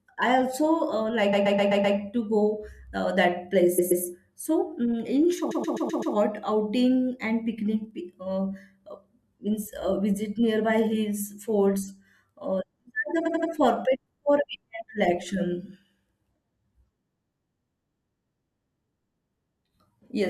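The speech stutters, replaying one short slice, at 1.32 to 1.96 s, 3.78 to 4.03 s, 5.50 to 6.14 s and 13.25 to 13.50 s. These are repeated frames: a block of compressed frames, 128 ms long in the first three events and about 85 ms in the last, was decoded again and again, adding 640, 256, 640 and 256 ms of extra time.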